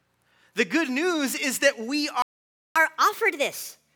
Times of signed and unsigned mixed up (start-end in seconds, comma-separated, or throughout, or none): none